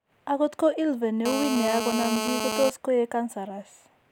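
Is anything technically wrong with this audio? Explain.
Yes, there's GSM phone buzz from about 1.26 s to 2.7 s. A 2G phone close to the gear was on a call, transmitting in bursts at 217 Hz, and something in the audio path rectified those radio pulses into the signal. You hear it as a harsh, raspy buzz at 217 Hz with a stack of harmonics, holding nearly steady and sitting only about 4 dB below the speech, so it's hard to miss.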